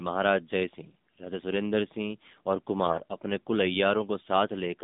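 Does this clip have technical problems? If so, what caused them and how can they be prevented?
Yes. The call passed through the AMR narrowband mobile codec at what sounds like its 7.4 kbps mode. The audio was resampled to 8 kHz and rebuilt from a vocal-tract model driven by a handful of pulses per 5 ms subframe. Here the band runs only from about 150 Hz to 3.7 kHz, so the sound is thin and muffled, and the low bit budget makes it plainly buzzy and synthetic. To prevent this, carry the call over a wideband codec such as AMR-WB or EVS, or at a higher AMR mode.

From 2.86 to 3.02 s there are AMR bit errors. A weak radio link flipped the lightly protected bits in a short run of frames, which fits roughly seven damaged 20 ms frames at a bit error rate of around 5 percent. The frame checksum still passed, so the decoder used the corrupted pulse positions, gains and spectral values. The sound keeps its pitch and level through that stretch but turns hoarse, scratchy and gargly. 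To prevent this, improve the radio link or use stronger channel coding so that corrupted frames are caught and concealed rather than decoded.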